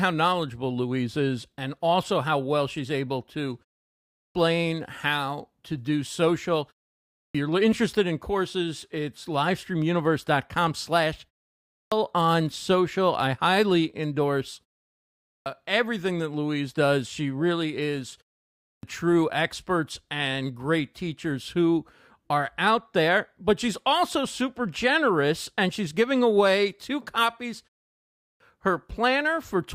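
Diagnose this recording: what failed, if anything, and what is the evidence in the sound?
Speech re-enters out of short pauses with its opening chopped away: at 3.98, 6.97, 11.57, 15.07, 18.47 and 28.02 s, roughly 0.35 to 0.39 s of sound is missing after gaps of only 0.33 to 0.5 s. Examples are the cut after "well she's able to" leading into "how to do social", and after "really is" before "true experts and great". This is a clipped start after a pause at the playback stage: the output device sleeps during silence and needs a moment to wake, losing each phrase's onset.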